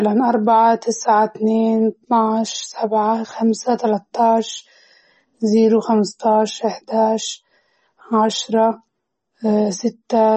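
MP3 compression runs throughout: nothing remains above about 8.3 kHz, and weak frequency lines flicker frame to frame, giving watery, swirly sibilants, likely from a 32 kbps encode.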